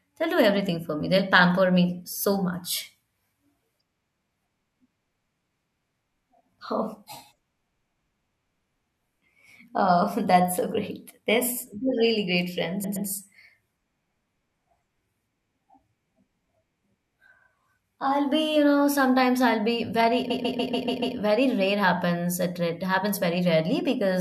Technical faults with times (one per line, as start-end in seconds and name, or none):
12.83-13.07 repeated frames
20.29-21.16 repeated frames